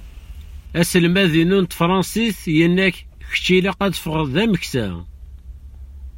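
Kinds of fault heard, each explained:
No technical faults can be heard in the signal; it stays continuous and stable throughout, with no dropouts, distortion, glitches or level problems.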